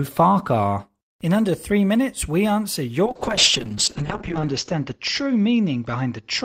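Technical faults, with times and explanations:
3.06–6.45 s, call bitrate drop: the encoder's budget collapses from about 32 kbps to 7 kbps, coarsening the speech into a rough, muffled sound. The spectrogram shows the upper band chopped off at 8 kHz, and the worst stretch lasts about 1.2 s.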